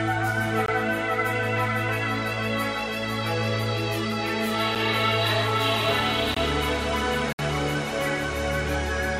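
A music clip with four blocks of digital silence, at 0.66 s, 4.75 s, 6.34 s and 7.33 s. They last 21 ms, 8 ms, 21 ms and 64 ms. The sound drops straight to zero and back. The 21 ms gaps fit an unfilled 1024-sample buffer.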